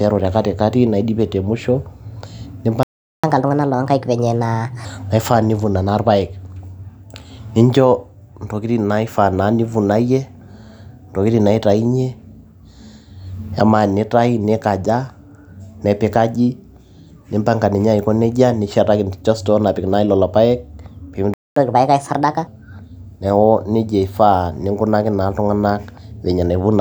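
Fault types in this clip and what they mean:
Playback stall: The speech cuts out mid-flow and the output goes completely silent for a noticeable gap, then resumes. This happens twice, from 2.83 to 3.24 s (about 0.40 s) and from 21.34 to 21.56 s (about 0.23 s). The likely cause is the player running short of buffered data, or its output thread being briefly blocked, so nothing reaches the output until the data arrives again.
Catch-up at higher speed: Right after each stall the speech runs fast and sounds raised in pitch. It plays at 1.25 times normal speed, which lifts the pitch by roughly four semitones, before dropping back to normal. The first episode runs from 3.24 to 4.85 s and the second from 21.56 to 22.47 s. The player is resampling its accumulated backlog to win back the time lost in the gap, so tempo and pitch rise together.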